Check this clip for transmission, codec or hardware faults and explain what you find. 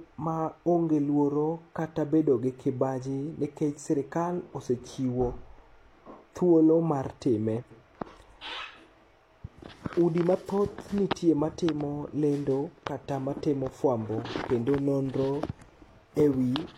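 One transmission fault is present in this speech clip: frames out of order. From 7.61 to 7.81 s, just after "thuolo mar time", two adjacent blocks of about 93 ms each were delivered in reverse sequence and decoded as received, which fits runs of two frames each. The stretch plays with its halves swapped, so it comes across as a brief garbled flutter. No audio is lost; the overall timing stays intact.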